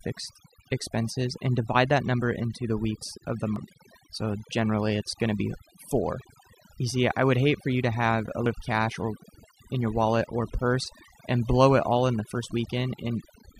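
Throughout the speech, overdone noise removal pulls frequency bands near the noise estimate far down, leaving near-silent background with twinkling specks. At 3.56 s and 8.46 s, the audio skips, dropping roughly a tenth of a second; this is likely audio missing between chunks, lost at joins about five seconds apart.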